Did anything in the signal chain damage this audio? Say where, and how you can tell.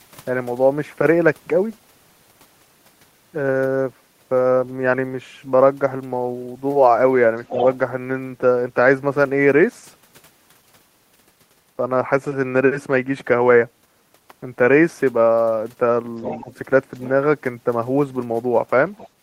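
Yes. Call processing, likely a residual echo canceller fault, let the loudspeaker's playback reach the microphone. The other side's voice leaking through appears as scraps at 7.48–7.64, 16.21–16.53, 17.01–17.09 and 18.97–19.09 s, strongest around 16.2 s.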